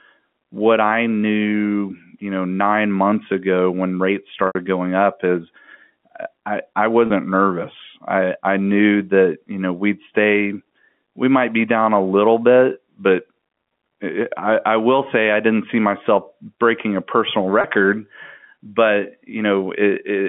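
A held, buzzy sound at 4.47 s, lasting 80 ms and fading out, then shorter 30 ms buzzy holds at 7.07 s and 17.61 s: packet loss with pitch repetition, the last pitch period looped to cover missing speech on a 150 Hz to 3.4 kHz G.711 telephone line.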